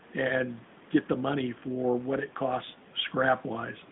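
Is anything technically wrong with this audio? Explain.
Yes. The whole clip has been through an AMR narrowband mobile codec, the standard 2G/3G phone-call codec. The speech sits in a band of roughly 150 Hz to 3.6 kHz, with nothing above, so it sounds boxed-in and telephone-like. AMR-NB doesn't send the waveform itself. It sends a vocal-tract filter plus a few excitation pulses in every short frame, so the speech comes out plainly buzzy and synthetic. That damage fits a mid-rate mode of about 10.2 kbps.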